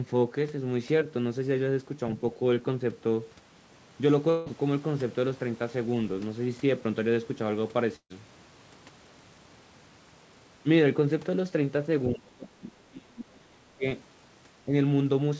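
Speech, carried over a call path whose content stops at 8 kHz, which fits G.722 at 64 kbps. From 4.30 to 4.48 s a long network dropout is the likely cause: about 160 ms of audio is lost, and the gap is filled with a fading continuation of the preceding sound. At 7.96 to 8.12 s a burst of packet loss removes about 140 ms. The last sound is held and faded, then falls silent for the final stretch before audio resumes further on. Between 12.08 and 13.85 s the speech dips by up to about 30 dB over roughly 1.5 s, likely speech suppressed in double talk by the echo canceller. A brief likely repeat of the same suppression at 14.66 to 14.73 s pulls the level down by only about 5 dB.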